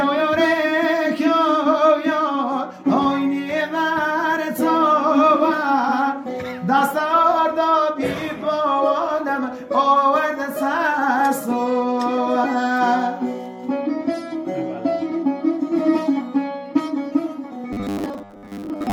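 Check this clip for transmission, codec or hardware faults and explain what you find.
One fault is audible, robotic sound from repeated short buffers, in the last stretch of the clip. It runs from 17.73 s to 18.93 s, when the clip ends. New audio likely arrives too seldom, so the playback fills each gap by looping the last short slice. The buzz sits at 100 Hz, which fits a slice of about 10 ms. Most of that stretch is repeats, not fresh audio. The sound turns rigid and metallic, with a fixed 100 Hz drone.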